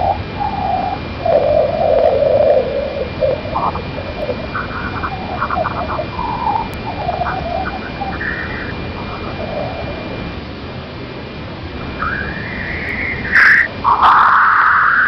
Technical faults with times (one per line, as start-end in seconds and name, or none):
4.22 bit error spike
6.74 bit error spike
12.89 bit error spike